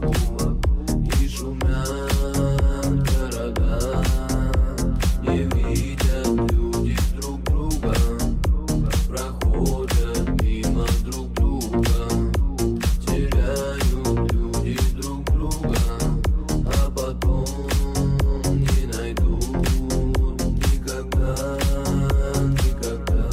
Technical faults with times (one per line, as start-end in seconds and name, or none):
0.00-23.33 mains hum